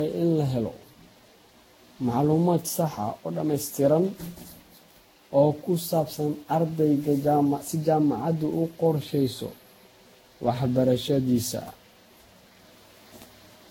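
Throughout, the speech sounds swirly, smeared and hollow, with blurred attacks and nothing above 16.6 kHz. This is likely generation loss, from about ten lossy re-encodes near 60 kbit/s.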